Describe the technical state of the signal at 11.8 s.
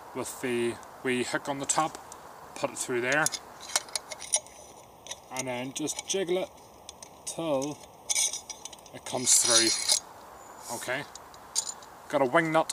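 Nothing is wrong with the signal at 11.8 s; the audio is intact at that moment.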